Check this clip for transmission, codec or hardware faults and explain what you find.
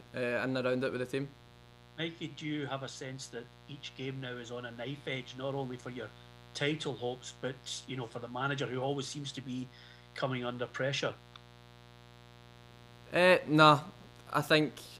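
One hardware fault runs through the whole clip: mains buzz. A steady, raspy buzz sits under the sound from start to finish, about 25 dB below it. It comes from sharp switching spikes leaking in twice per 60 Hz cycle, through a dimmer, rectifier or missing shield, stacking 60 Hz harmonics up into the kHz range.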